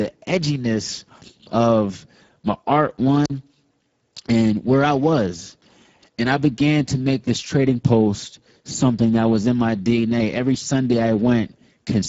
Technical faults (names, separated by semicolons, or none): Speex codec; wireless microphone squelch dropout